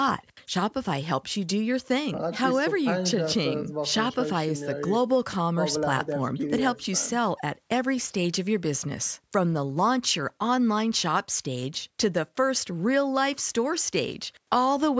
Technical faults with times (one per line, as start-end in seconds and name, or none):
none